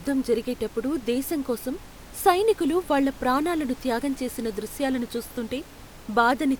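No faults on the speech path; the room noise sitting about 21 dB below the speech belongs to the recording space, not the system.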